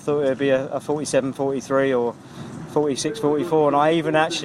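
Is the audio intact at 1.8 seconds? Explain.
No. At 1.8 seconds the audio sits inside a run of repeated timing corrections lasting from 0.15 to 4.18 s. The receiver keeps repeating short slices to stretch the sound to about 98% speed, adding roughly a tenth of a second overall, heard, if at all, as slight hiccups or an unsteady tempo.

Behind it is clock drift between sender and receiver: the sender's clock runs about 3% slow, so the jitter buffer keeps draining and must be topped up. They recur unevenly through the whole clip, always stretching.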